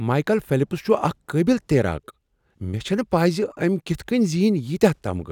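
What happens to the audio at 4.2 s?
Nothing goes wrong at 4.2 s: the speech carries on intact through that moment, with no dropout, click, distortion or other fault to be heard.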